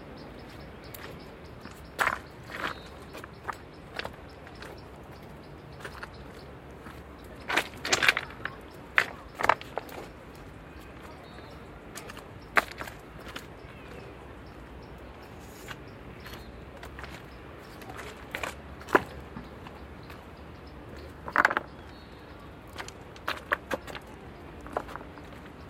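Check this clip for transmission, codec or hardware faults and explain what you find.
No transmission, codec or hardware faults can be heard; the signal holds steady and continuous throughout, with no breaks, distortion or level disturbances.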